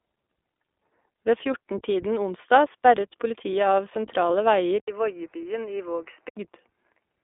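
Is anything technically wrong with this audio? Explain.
Yes, there are two faults.

iLBC codec, throughout: the speech has been squeezed through a narrowband VoIP codec that codes each 20 ms frame independently, which fits its 15.2 kbps mode. Nothing above 3.7 kHz survives, and the voice sounds plainly rough and slightly synthetic.

Input switched to a poorer device, 4.80 to 6.37 s: the sound likely comes from a different, lower-quality input during this stretch. An 80 ms silence marks the switch, then the top end falls to 3 kHz, the level drops about 5 dB, and a faint new noise floor appears. The sound clears again at 6.37 s.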